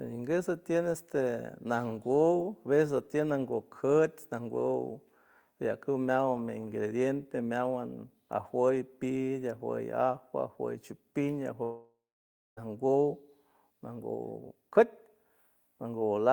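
A speech clip with a long network dropout from 11.63 to 12.59 s: about 0.94 s of audio is lost, and the receiver's concealment stretches the last sound into a fading buzz before roughly 0.61 s of silence. Speech resumes without the missing stretch, likely from a lengthy packet-loss burst. On a spectrogram this shows as smeared, repeating harmonics decaying into an empty band; the waveform tapers to a flat line.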